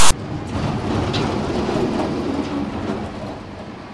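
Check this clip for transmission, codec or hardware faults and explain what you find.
One fault is present, right at the start. From 0.00 to 0.12 s, file tags are played as audio: text metadata read as samples gives an off-centre rasp, then zero padding falls silent. Its hard edges at file start distinguish it from random noise bursts.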